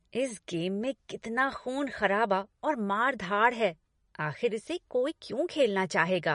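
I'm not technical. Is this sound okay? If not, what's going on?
No. The speech sounds dull and plainly watery from start to finish. Nothing above about 10.6 kHz survives, so crisp s sounds lose their edge. This is likely MP3 compression, which throws away detail it judges less important to save space.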